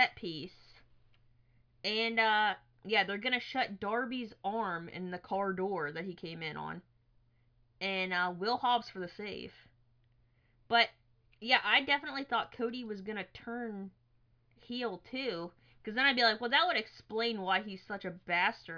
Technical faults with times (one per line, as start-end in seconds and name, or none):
none